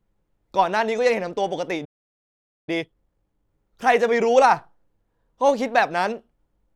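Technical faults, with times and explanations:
1.84 to 2.69 s, playback stall: The speech cuts off mid-flow and the output falls silent for about 0.83 s. The player likely ran short of buffered data or had its output thread blocked. Sound returns only once that recovers.
2.69 to 3.51 s, time-compressed catch-up: Right after the gap, the speech runs at double speed for about 0.8 s. Pitch stays normal. The player drops small slices and cross-fades the joins to clear its backlog, which leaves a hurried quality.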